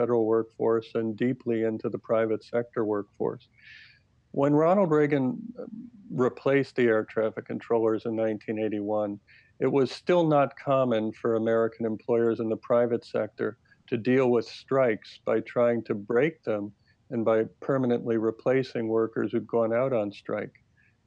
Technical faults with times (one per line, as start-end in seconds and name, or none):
none